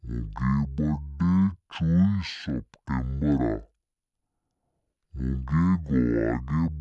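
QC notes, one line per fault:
Throughout: wrong sample rate. The speech runs at half speed and sits a full octave, 12 semitones, low, because the samples are clocked out at about half their capture rate with no conversion, which fits 44.1 kHz material played near 22 kHz.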